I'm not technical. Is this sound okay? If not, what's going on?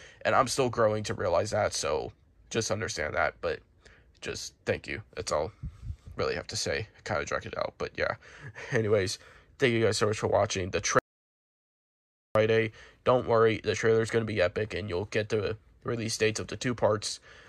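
No, not quite. From 10.99 to 12.35 seconds there's an audio dropout to silence: the sound cuts out completely for about 1.4 seconds, with no background hiss at all, then resumes mid-flow. The input was likely lost briefly, so whatever happened then is gone.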